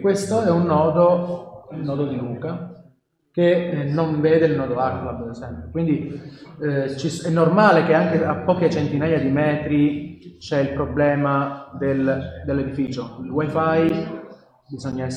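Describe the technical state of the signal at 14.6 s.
At 14.6 s the signal sits inside periodic USB or driver dropouts (12.87–14.93 s). Brief silent gaps of roughly 10 ms recur every 1.024 s, ticking evenly, unlike random clicks.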